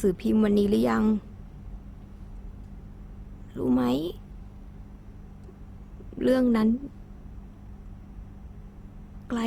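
Throughout the speech, tonal detail turns grainy, rough and noisy, though the top end still extends to about 20.2 kHz. This is likely Opus compression in its CELT mode, at a low rate near 24 kbps, filling starved bands with noise.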